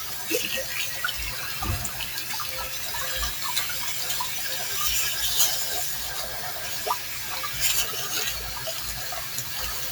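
These sounds pass through a noise suppressor applied to non-speech audio throughout, pulling sustained tones and tails down by around 5 dB, visible as pumping envelopes and patchy, thinned spectrogram texture between onsets.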